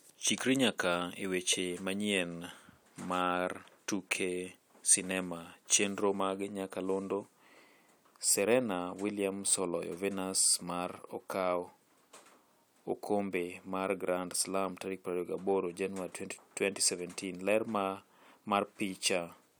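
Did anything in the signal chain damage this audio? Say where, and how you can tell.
No, nothing in the signal chain damaged this speech.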